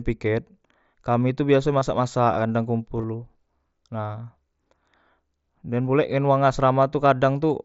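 At 1.80 s, just after "piket kami tu biaso", there is concealed Bluetooth headset packet loss. About 15 ms of audio never reached the phone. The receiver filled the gap by repeating the closest-matching recent stretch of waveform. At 2.97 to 3.04 s it happens again. About 37.5 ms goes missing, scattered over 60 ms, with the longest gap at 22.5 ms. Here the patch-in sounds buzzy, with a slight warble as the real speech resumes, all through the mSBC headset link.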